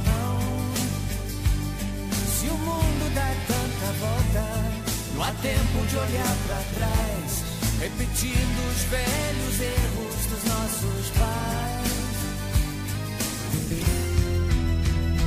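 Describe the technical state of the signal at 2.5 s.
At 2.5 s the signal is intact, with no dropout, distortion, or other disturbance at that point.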